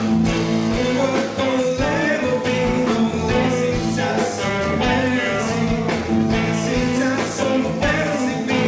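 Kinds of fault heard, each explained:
No faults are audible: the signal carries the coding character of a wideband call codec, consistent with G.722, with the spectrum ending at about 8 kHz.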